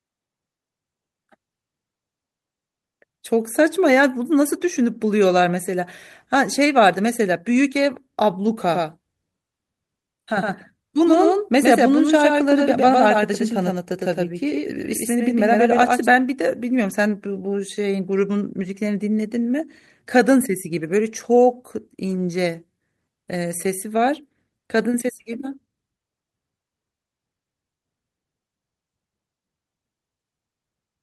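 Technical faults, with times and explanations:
8.45–8.51, 12.07–12.09, 16.81–16.95, 18.59–18.61 and 22.07–22.25 s, lost packet rebuilt from error correction: missing stretches are filled with rougher, noisier low-bitrate copies, not gaps.
8.68–16.06 s, doubled audio track: a second full-band copy sits about 5 dB lower, roughly a tenth of a second behind, dry and starting and stopping abruptly, likely from a slower duplicate capture path.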